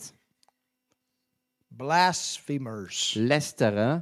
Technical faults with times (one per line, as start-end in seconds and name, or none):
none